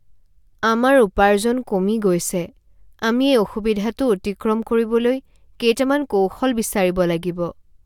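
Listening to the recorded speech, nothing stood out as a technical problem.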